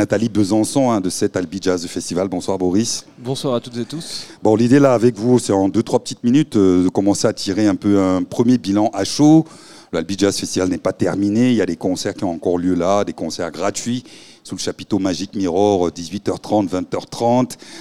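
No technical faults can be heard anywhere in the recording, which carries through without any disruption to the signal.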